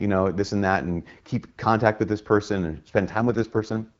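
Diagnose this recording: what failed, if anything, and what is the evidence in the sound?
The network stage failed. Under a weak radio link, the network ordered an AMR rate drop on this wideband speech call, cutting the codec's bitrate so more of each frame went to error protection. From 3.11 s to 3.90 s the speech turns rougher and more synthetic, with a raspy edge, which fits a fall from 12.65 kbit/s to the 6.6 kbit/s mode. The band stays just as wide as before, there is no gap, and the clearer HD Voice sound returns once the rate recovers.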